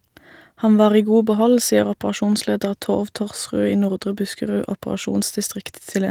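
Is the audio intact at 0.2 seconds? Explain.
Yes, at 0.2 seconds the speech is intact, with no fault at that moment, just the light, full-band Opus compression that runs through the whole clip.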